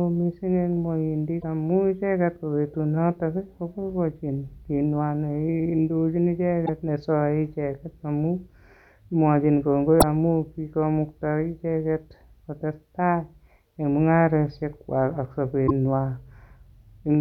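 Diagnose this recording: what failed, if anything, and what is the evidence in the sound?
Damaged data in a compressed stream, at the codec stage: brief glitches break the speech at 1.40–1.44, 6.62–6.69, 9.97–10.03 and 15.64–15.71 s, the last just after "en mung'arosiek kwag ak". The decoder misreads corrupted frames until it resyncs, leaving short broadband smears on a spectrogram.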